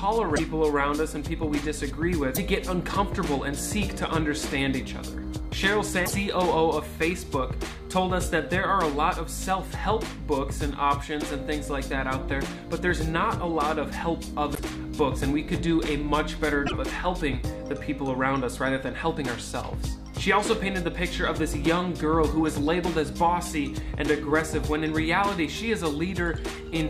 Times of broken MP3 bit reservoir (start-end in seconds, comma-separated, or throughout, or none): 0.35-0.40, 2.34-2.38, 6.05-6.12, 14.54-14.59, 16.65-16.72